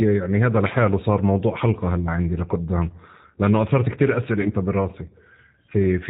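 A speech recording passed throughout through the G.729 codec, whose sound fits its 8 kbit/s mode: nothing above 4 kHz survives, leaving the voice plainly rough and synthetic. From 4.41 to 4.51 s, VoIP packet loss concealed by the speech codec: roughly 40 ms of audio went missing, consistent with two lost packets, and the decoder stretched the preceding sound into a fading buzzy tone or coloured noise that stays weak briefly after.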